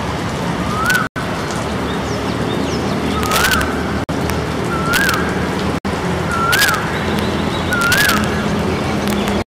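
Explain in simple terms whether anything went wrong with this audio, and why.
Two separate faults affect the audio.

The first is integer overflow, heard as sharp, violent cracks at 0.86–0.96 s, 3.23–3.62 s, 4.30 s, 4.93–5.14 s, 6.53–6.75 s, 7.19 s, 7.73–8.24 s and 9.08–9.28 s. Each time the sound got louder than the digital system could count, the number ran past its maximum and wrapped around to the opposite extreme. This produces a harsh snap that is much sharper than ordinary distortion.

The second is a Bluetooth stall, where the sound drops to silence for an instant and then resumes. This happens at 1.07 s for about 90 ms, at 4.04 s for about 50 ms and at 5.78 s for about 60 ms. The likely cause is radio interference delaying the wireless data, which let the headphones' small reserve of audio run out until the missing data arrived.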